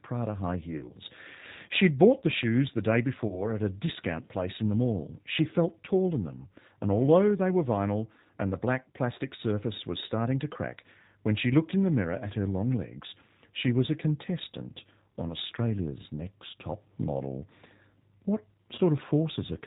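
G.729 codec damage runs through the whole clip. At 8 kbit/s the speech is rebuilt from a vocal tract filter, a pitch predictor and a handful of pulses per frame, so nothing above 4 kHz survives and the voice sounds plainly rough and synthetic.

VoIP packet loss concealed by the speech codec occurs at 0.77 to 0.92 s, 3.27 to 3.42 s and 18.75 to 18.80 s. Each gap is about 30 ms, which fits a single lost packet. The decoder stretches its last pitch and filter into a fading buzzy tone or coloured noise, and the voice stays weakened briefly afterward.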